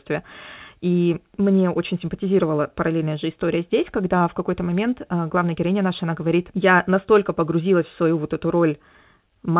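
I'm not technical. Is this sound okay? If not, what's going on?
No. At about 4.2 seconds, just after "параллельная же история здесь", there is a short concealed packet loss: a small piece of the call, about 20 milliseconds, arrived too late to be played. The receiving end covered the gap by stretching out the sound it had just played and then blending back into the real audio. You hear this as a brief smear or tiny wobble lasting roughly 40 milliseconds. All of the audio, which comes through a phone-style call line with nothing above 4 kHz, also sounds muffled.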